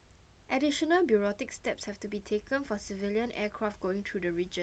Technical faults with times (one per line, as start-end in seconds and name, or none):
none